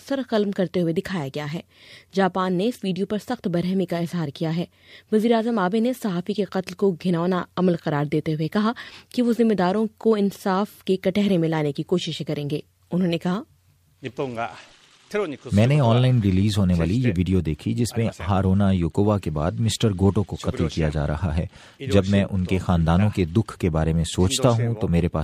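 Nothing stood out as a technical fault on listening to the clip.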